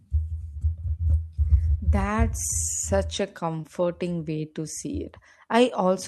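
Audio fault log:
3.61–3.65 s, short concealed packet loss: about 20 ms of speech arrived too late to decode, so the receiver extended the preceding sound and crossfaded back, leaving a brief smear. Unlike a hard dropout, there is no silent gap or click.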